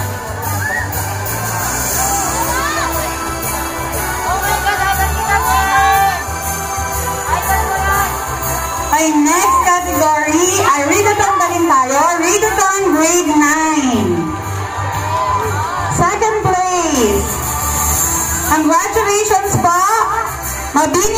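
From 13.54 to 16.95 s the audio turns dull and muffled, its top end sloping away smoothly. This is de-emphasis applied wrongly: a treble cut intended to reverse pre-emphasis was used where none existed or applied twice, leaving 10 kHz about 11 dB below 1 kHz.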